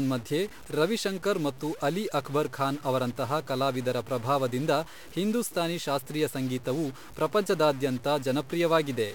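From start to finish the speech carries a harsh, buzzy distortion, and the pauses fill with a steady hiss instead of falling silent. This points to a stuck bit, likely a single data line held fixed, adding errors of about -40 dBFS.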